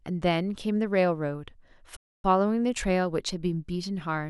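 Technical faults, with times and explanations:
1.96–2.24 s, playback stall: the player most likely ran short of buffered data or had its output thread held up, so nothing reached the output for about 275 ms. The speech cuts off abruptly in mid-flow and leaves a dead gap of silence, not a fade or a dropout of a few samples. Once the player recovers, the sound resumes, and the pause registers as an unnatural hitch in the delivery.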